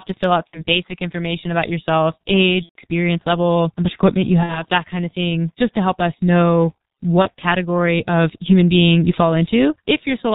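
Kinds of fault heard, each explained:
G.723.1 codec: This early internet-telephony codec squeezes speech into tiny 30 ms frames at a very low rate. The sound here fits its 6.3 kbit/s mode. Nothing above 4 kHz survives, so the speech is muffled throughout. The voice model updates slowly, which leaves the speech hoarse and rough. Consonants smear into each other. The damage is heavy and lasts for the whole clip.
VoIP packet loss concealed by the speech codec: Speech data went missing, and the decoder filled each gap by guessing. It reused its last pitch and filter and lowered the level step by step. This happens at 0.48 to 0.64 s, 2.63 to 2.76 s, 4.43 to 4.65 s and 7.22 to 7.27 s. Each gap turns into a fading buzzy tone or coloured noise. The gap near 2.6 s points to about 120 ms of lost audio. The shortest points to about 30 ms. The voice stays weak for a moment after each gap.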